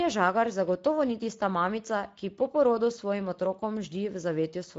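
From start to finish the speech carries Speex codec damage, and it's plainly audible: a hoarse, noisy grain where the coder runs short of bits for the excitation, which fits a rate around 16.8 kbps. Nothing survives above 7.7 kHz, and the top band sounds like shaped hiss.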